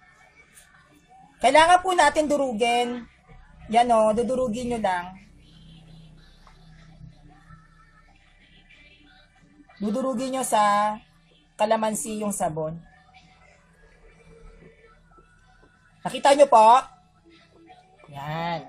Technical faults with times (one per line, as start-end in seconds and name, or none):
none